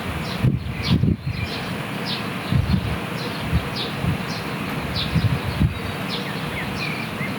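Everyday sounds with gain pumping throughout: the gain ducks by roughly 10 dB under every loud sound, flattening the dynamics. The waveform shows squashed peaks. The likely cause is excessive input gain driving a fast limiter.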